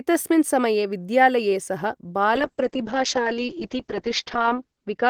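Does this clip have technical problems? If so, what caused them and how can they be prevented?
Yes. Call bitrate drop from 2.37 s to the end: audio narrows to 8 kHz and turns coarse, consistent with the encoder cut from about 32 to 7 kbps. To prevent it, give the call a steadier, less congested connection and set a higher minimum encoder bitrate.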